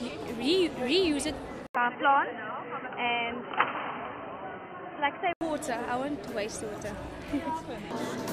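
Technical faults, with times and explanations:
1.67 to 5.41 s, input likely switched to a poorer device: there's a gap of about 80 ms, then the sound goes dull and boxy, with nothing above roughly 3.1 kHz, and a new background noise sits around 30 dB under the signal. Loudness barely moves, so what you notice is the narrow band and the different noise, the signature of a lesser microphone or headset call profile, until the fuller sound returns at 5.41 s.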